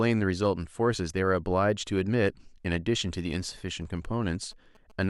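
A nearby 2G phone's signalling transmissions are being rectified by the audio circuit, producing GSM signalling bursts from 3.34 to 4.92 s. Under the speech they come through as a galloping dit-dit-dit of short buzzes at about 217 Hz, roughly 30 dB down.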